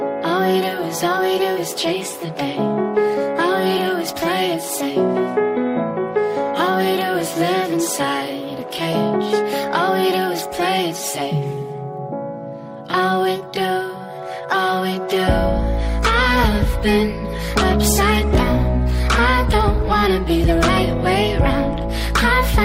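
No technical fault can be heard anywhere in this audio. There is nothing to place in time or trace back to a cause.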